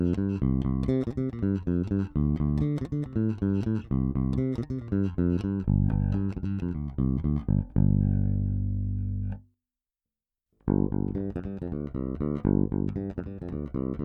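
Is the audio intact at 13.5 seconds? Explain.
Yes, at 13.5 seconds the audio is intact, with no audible dropout, glitch or distortion at that moment.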